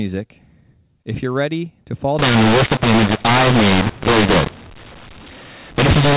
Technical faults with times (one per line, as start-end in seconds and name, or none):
2.19-6.17 mu-law and A-law mixed up